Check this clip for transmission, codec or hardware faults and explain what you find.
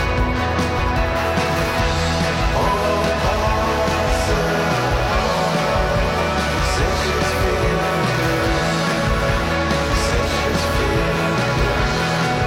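There is one codec fault: compressed frames skipped. At about 0.75 to 0.81 s, about one frame, roughly 50 ms of audio, is never played, which fits a 46.4 ms frame, so the sound jumps ahead. The join where the missing audio was cut out is heard as a sudden jump forward.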